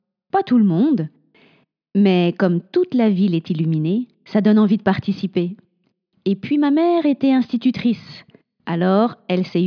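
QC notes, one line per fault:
No faults heard; nothing to log.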